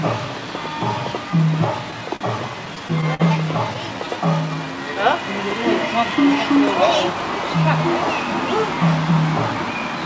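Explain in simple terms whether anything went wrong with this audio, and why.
A few things went wrong, all from the network delivering audio unevenly to the receiver's jitter buffer.

First, a short stall from a late packet at 2.16 to 2.24 s. A packet showed up late, the buffer ran dry, and the receiver held the last sound for about 44 ms until it arrived. Nothing's lost, just one sound hanging on a touch too long.

Then repeated stalls (stutter) from 2.66 to 3.23 s. Packets kept arriving late, so the buffer emptied five times, with about 90 ms of stretched-out filler in total and the longest gap 51 ms. Nothing goes missing, but it drags and hiccups.

Next, a jitter buffer slow-down from 3.97 to 4.95 s. Running low on reserve, the receiver repeated tiny slices of sound to buy time, adding 109 ms. The audio plays at 90% speed with the same pitch, so things sound drawn out.

Finally, a jitter buffer speed-up from 9.55 s to the end. 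Too much audio had piled up, so the receiver snipped out small pieces, around 70 ms in all, to catch up. It runs at 112% speed at the same pitch and sounds a bit rushed.

The call codec underneath it all caps everything at 8 kHz, so the top end sounds a little dull.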